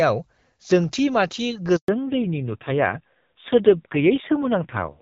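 At 1.76 s the speech cuts out in a handover gap: the call is being passed from one network to another, and for about 120 ms, until 1.88 s, no speech frames arrive. The sound fades within a few tens of milliseconds and then holds true silence, so whatever was said in that window is simply gone. Unlike a burst of packet loss, there is no buzzy or smeared concealment filling the hole, just a clean fade into nothing.

From 1.88 s to the end of the speech, a fallback to narrowband takes over. Before the gap, the speech has the fuller, lightly coded character of AMR wideband (HD Voice), which fits a rate around 12.65 kbit/s. Afterwards, the new link has dropped to the older narrowband codec at what sounds like a low rate near 5.9 kbit/s, and nothing above 4 kHz survives. The speech turns dull and muffled, with a rougher, grainier texture. A plain low-pass filter would only dull the sound, but here the bandwidth loss and the coarser coding arrive together, exactly at the handover.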